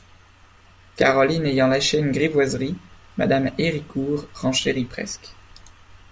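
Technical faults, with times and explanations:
No technical faults are present.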